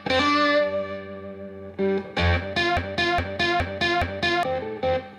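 At 2.77 s a broken-record loop begins: a 0.42 s fragment of audio repeats exactly, back to back, four times until 4.43 s. The player, encoder or stream likely stalled and kept resending its last held fragment, so the audio belonging to that span is lost.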